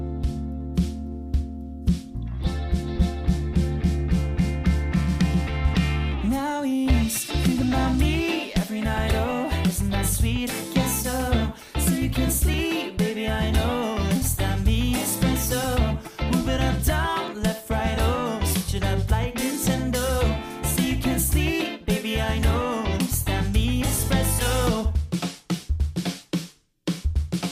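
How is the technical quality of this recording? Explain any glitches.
The recording has two brief glitches of the same kind. A dropped buffer (overrun) shows up at 12.54 s and 17.28 s: a very short slice, around a millisecond or two, is missing and the edges butt together. Each is heard as a tiny jump in the sound, most likely because the software fell behind and the hardware overwrote the samples.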